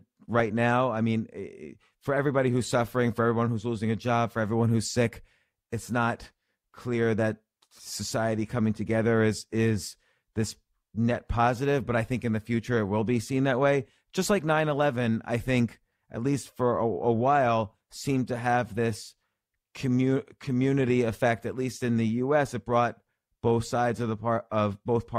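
No technical faults can be heard anywhere in the recording.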